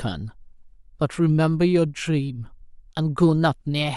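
Nothing here stands out as a technical fault; the speech runs along without any dropouts, glitches or other trouble worth pointing to.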